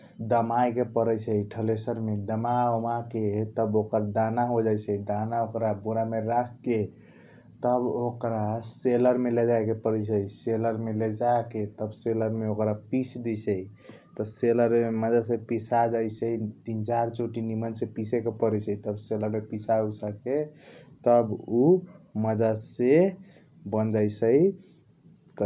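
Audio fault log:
No faults are heard in this speech recording. There is nothing to log against any time in the clip.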